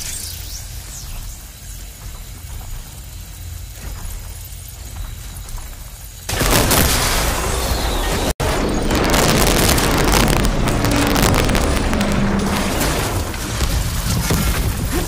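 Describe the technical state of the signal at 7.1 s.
Integer overflow runs from 6.41 to 7.29 s: peaks driven about 8 dB past full scale wrap to the opposite sign, producing violent cracks sharper than clipping.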